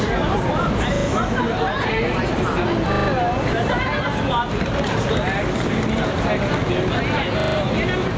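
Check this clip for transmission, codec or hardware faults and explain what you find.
Two faults are present: level pumping throughout, and three buffer-repeat stutters.

Gain pumping, throughout: the level swings by about 5 dB around loud sounds, likely from excessive input gain driving a fast limiter.

Repeated buffer, at 0.96–1.08 s, 2.92–3.08 s and 7.4–7.56 s: late audio causes the device to replay its last chunk three or four times, consistent with a 40 ms buffer. Each occurrence is a brief stutter with hard joins.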